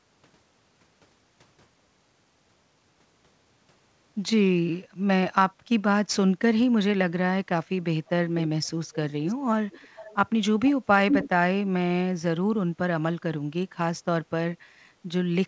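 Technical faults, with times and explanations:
8.06–8.1, 8.92–8.96, 9.27–9.35, 9.7–10.16 and 11.09–11.29 s, echo leak: a copy of the talker comes back about 395 ms late, first barely audible, then louder until the last scrap is as loud as the speech. The likely cause is a far-end speakerphone whose echo canceller isn't fully removing what its mic picks up.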